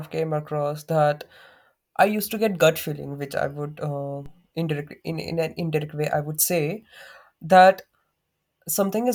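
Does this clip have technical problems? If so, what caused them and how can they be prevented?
Yes. A DC step occurs at 4.26 s, between "which I would uh" and "indirect in in an". The waveform's zero line jumps by about −32 dBFS. A 5 Hz high-pass then pulls it back, so it sags toward centre within a few tens of milliseconds. The speech continues unchanged over a low thump. On a waveform the baseline visibly shifts and creeps back. On a spectrogram it shows as a brief vertical smear concentrated at the lowest frequencies. It can be prevented by keeping converters from recalibrating mid-recording and by AC-coupling or high-passing any input before it is switched in.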